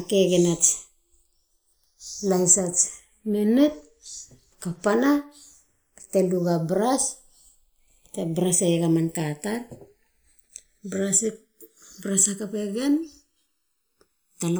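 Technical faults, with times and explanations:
Throughout, channels drifting apart: the two channels seem to run on separate clocks that disagree by something like 70 parts per million, so the delay between them keeps growing, reaching under a millisecond by the end. Summed to mono, the comb-filter notches glide steadily across the spectrum, a slow flanging on the speech. Unlike a fixed inter-channel delay, the colouration keeps moving, and unlike a flanger effect it drifts one way rather than sweeping back and forth.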